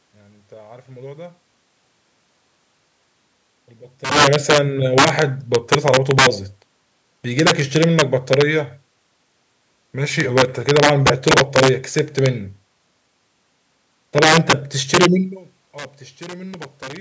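Integer overflow cracks this speech recording at 4.05–4.58, 4.98–6.27, 7.39–8.42, 10.20–12.26, 14.18–14.53, 14.94–15.06, 15.78–15.85 and 16.22–16.97 s. The gain pushes the loudest peaks about 3 to 6 dB past the integer ceiling. Instead of being limited, those samples wrap around to the opposite extreme, so each over-range peak snaps across the full scale. The result is harsh, violent cracking far sharper than ordinary clipping.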